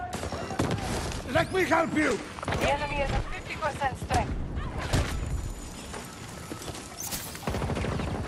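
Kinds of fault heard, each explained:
Nothing here stands out as a fault; the audio just runs along without any glitch or hiccup that catches the ear.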